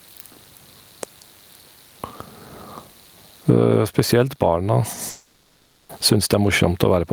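Speech, with gain pumping throughout. The swing is around 15 dB. Loud and quiet passages sit squashed together. The likely cause is input gain set far too high, with a fast limiter clamping each peak. A long network dropout runs from 5.09 to 5.91 s. The last sound is stretched into a fading fill for about 800 ms. Speech resumes afterwards with that stretch missing. This is likely packets that never arrived.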